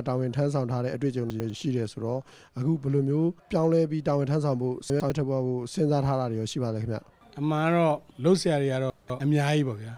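At 1.3 to 1.5 s and 4.9 to 5.1 s, a 100 ms chunk arrives one slot late, and at 8.9 to 9.2 s one arrives two slots late. These chunks out of order sound jumbled at the hard joins, but unlike a dropout, nothing goes missing.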